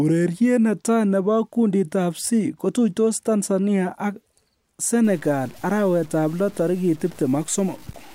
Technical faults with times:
5.04-8.14 low bit depth without dither

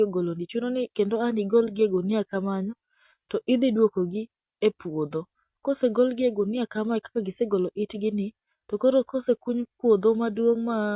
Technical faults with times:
none

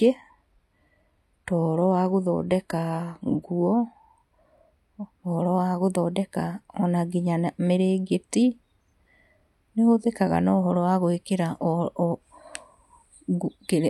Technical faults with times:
0.00-4.00 adaptive stream starting at a low bitrate

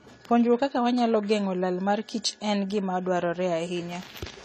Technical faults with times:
0.00-4.44 transcoding between lossy codecs

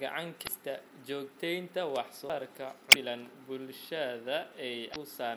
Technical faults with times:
0.43-0.48 damaged data in a compressed stream
2.29 CD skip
2.89-2.96 damaged data in a compressed stream
4.92-4.96 damaged data in a compressed stream

